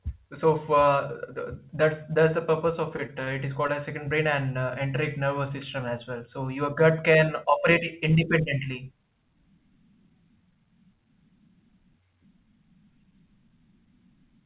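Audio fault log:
2.96 to 3.10 s, short concealed packet loss: Right after "the purpose of", two gaps of about 20 ms each, at 2.96 to 3.00 s and 3.06 to 3.10 s, never reached the decoder in time. The receiver filled each by extending the preceding sound for roughly 24 ms and 18 ms, then crossfaded back into the real signal. This is heard as two closely spaced smears or wobbles, and a brief consonant could drop out.
3.24 to 3.29 s, short stall from a late packet: A packet arrived late, so the jitter buffer briefly ran dry. The receiver held the last sound for about 23 ms until the data turned up, then resumed from the same point. Nothing is lost, but the timing shifts by 23 ms and one sound is slightly prolonged, with a faint buzz or dip where the synthetic hold sits. The whole clip carries narrowband call audio with nothing above 4 kHz, which suggests a G.711-type codec.
3.67 to 3.71 s, short concealed packet loss: Just before "as second brain and", another 20 ms of audio was lost and covered with about 20 ms of continuation of the preceding sound before blending back. 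It produces a short wobble at that point, and a quick consonant there can disappear.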